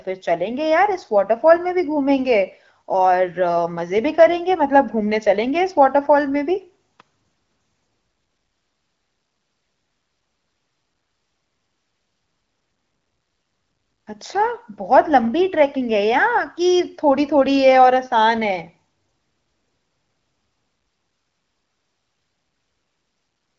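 No technical faults detected.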